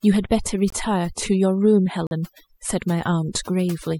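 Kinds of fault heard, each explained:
overdone noise removal: Heavy noise reduction strips bands near the noise floor throughout, leaving near-silent gaps with twinkling specks.
corrupt frame muted: Rejected compressed frames are replaced by silence. Abrupt holes open at 0.70 s, one frame long, and 2.07 s, two frames long.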